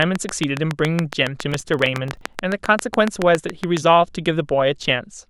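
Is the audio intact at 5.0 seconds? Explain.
Yes, the audio is intact at 5.0 seconds, with the speech running through that moment with no audible fault.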